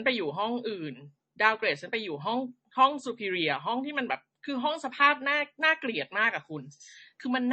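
From start to finish the speech carries two layers of coding damage at once: the dull, band-limited top end and swirly, smeared transients typical of a low-rate MP3, overlaid with the warbling pre-echo and metallic tonal artefacts of AAC-LC. This is likely transcoding between lossy codecs, with a low-bitrate MP3 around 32 kbit/s re-encoded to AAC-LC near 48 kbit/s. The second encoder wasted bits reproducing the first one's artefacts, and the MP3's low cut-off still sets the bandwidth.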